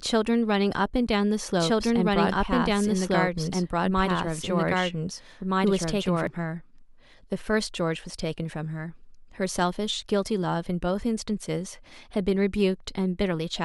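A doubled audio track runs from 1.59 s to 6.27 s: the speech is joined by a second, equally loud copy trailing about one and a half seconds behind, dry and full-band, cutting in and out abruptly, likely from a duplicate capture path or misaligned edit.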